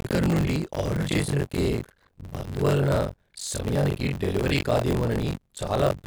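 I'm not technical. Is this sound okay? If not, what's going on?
No. The speech buzzes robotically throughout, about 47 times a second. This is buffer tearing: roughly half of each audio chunk repeats sound from a moment earlier.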